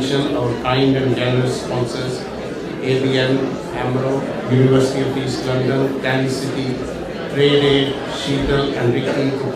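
Nothing in this one stands out as a technical problem; the audio just runs along without any glitch, dropout or other fault catching the ear.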